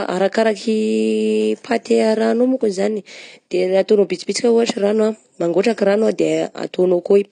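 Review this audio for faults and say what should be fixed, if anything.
Throughout, the speech sounds dull and smeared, with a warbling fizz on sibilants and nothing above 9.9 kHz. That points to AAC compression, likely AAC-LC at about 32 kbps, which cuts the top band and coarsely quantises the rest. Encode at a higher bitrate or from a lossless source.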